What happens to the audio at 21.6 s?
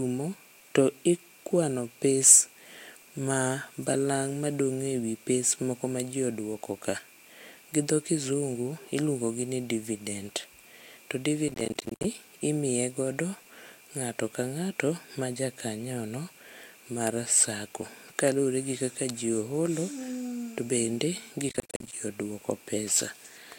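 At 21.6 s the speech is in the middle of a burst of processor overload crackle that runs from about 21.49 to 21.93 s. The processor keeps missing its deadlines for short buffers, each around 10 ms, and dozens of them over that stretch are filled with silence. Each hard-edged gap clicks, and together they form a gritty tearing over the speech. Unlike a single dropout, it is a dense, rapid chatter that stops abruptly once the load eases.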